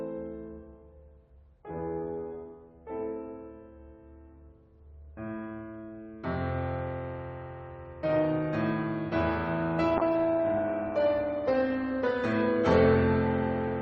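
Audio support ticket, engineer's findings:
Music turns coarse, watery and dull from 9.99 s to clip end. Call bitrate drop: encoder starved of bits, consistent with roughly 48 to 16 kbps, losing detail and top end.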